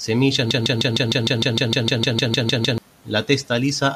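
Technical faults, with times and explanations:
0.51–2.78 s, broken-record loop: a 0.15 s fragment repeats 15 times, likely a stalled player resending its last buffer, so that stretch of speech is lost.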